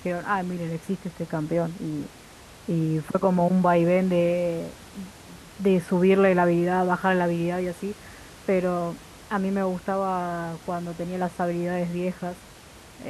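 Nothing goes wrong technically in this speech recording; the only extra sound is the room's own background noise, sitting about 22 dB below the speech, and that belongs to the space rather than to the system.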